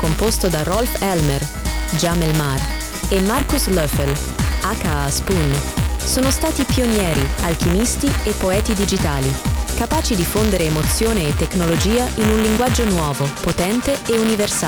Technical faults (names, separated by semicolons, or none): buffer tearing